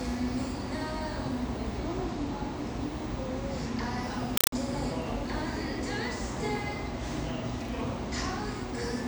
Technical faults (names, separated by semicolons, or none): compressed stream played as audio